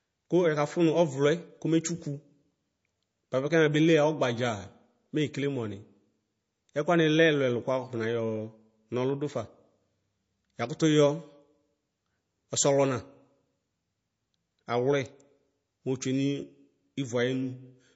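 From the first second to the end, the speech sounds dull and swirly, with nothing at all above about 7.7 kHz, so sibilants lose their edge. That's the mark of low-bitrate audio saved at a high bitrate: most likely the sound went through a low-rate MP3 pass, something around 32 kbit/s would fit, and was then re-saved as a much larger MP3, maybe 192 kbit/s. The second encode can't restore the missing top or smooth the artefacts.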